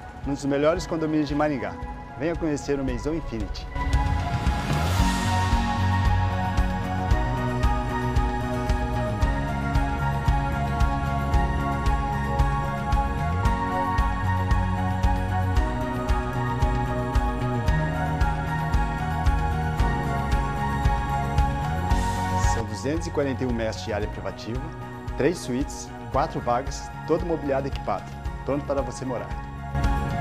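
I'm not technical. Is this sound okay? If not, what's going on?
Yes, it sounds fine; nothing stood out as a problem when listening to it.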